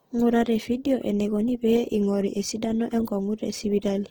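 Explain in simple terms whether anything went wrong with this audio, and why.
Opus compression roughness runs through the whole recording, from the start to the end. The speech sounds grainy and plainly noisy, likely because the Opus codec was squeezed for space and patched some sound detail with copied or noise-like filler instead of the real thing.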